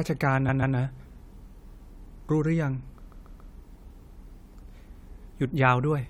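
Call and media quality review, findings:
Repeated frames, 0.48–0.76 s and 3.10–3.52 s: a 139.3 ms block of compressed frames, which fits a run of about six frames, was written or sent more than once. The decoder replays it as a stutter, two extra plays then three, lengthening the audio by 278.6 ms and 418.0 ms.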